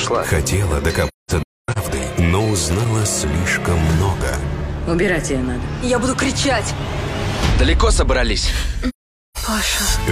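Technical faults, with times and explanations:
1.08–1.78 s and 8.89–9.37 s, AAC frame loss with muting: the decoder lost AAC frames and zeroed their spectrum. The first gap, about 0.5 s scattered over 0.68 s, has a longest run near 0.3 s. The second drops about 0.47 s. Overlapping windows fade each hole smoothly.
2.69–3.04 s, loose connector crackle: a worn or dirty contact in the signal path made and broke rapidly, chopping the audio for about 0.35 s. The result is an irregular burst of crackle and scratching rather than a clean dropout.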